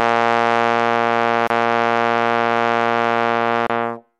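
It's a short music clip with two gaps at joins of encoded pieces: brief silences of about 29 ms at 1.47 s and 28 ms at 3.67 s, where separately encoded chunks were butted together untrimmed, encoder padding left in, before the music picks up where it stopped.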